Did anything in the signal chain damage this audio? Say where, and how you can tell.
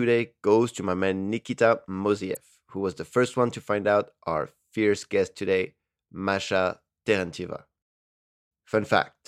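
Yes, damaged data in the compressed stream: a 54 ms disturbance at 2.31 s, just before "who was the first", as the decoder misread corrupted frames and resynchronised.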